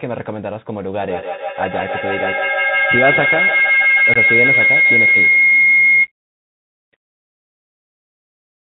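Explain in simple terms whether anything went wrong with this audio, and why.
A Bluetooth CVSD headset codec affects the whole recording. The speech went through the narrowband codec that Bluetooth headsets use for calls. It squeezes the sound into a rough up-or-down signal and drops everything above 4 kHz, so the speech sounds muffled and telephone-like. A fine, grainy hiss sits underneath, s sounds come out scratchy, and sharp, loud moments smear because the codec can't keep up with fast changes.

A feedback howl runs from 0.98 to 6.12 seconds. The sound from a loudspeaker was picked up again by a microphone on the same call and sent back out, growing louder on each trip instead of fading. That loop settles on one pitch, here a whine around 2 kHz, with one trip around the loop taking roughly 150 ms. At its peak it is louder than the speech.

Unconcealed Bluetooth headset packet loss occurs at 4.14 to 4.17 seconds, in the middle of the howl. 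A handful of the tiny data chunks sent between headset and phone never arrived, and nothing filled the gap. The result is a short hole of about 19 ms with abrupt edges that can click, and the sound resumes briefly quieter as the codec recovers.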